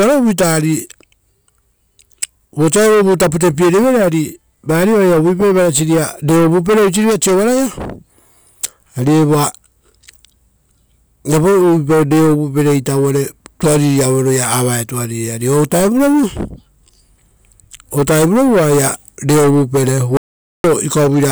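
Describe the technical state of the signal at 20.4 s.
At 20.4 s you're right in the middle of an audio dropout to silence, running from 20.17 to 20.64 s, so a bit under half a second. The speech cuts off mid-flow and the gap is silent, with no room tone at all, before the speech picks back up. The likely cause is the input briefly going missing, a link or device hiccup, while the recorder kept writing silence. Whatever was said there is simply lost.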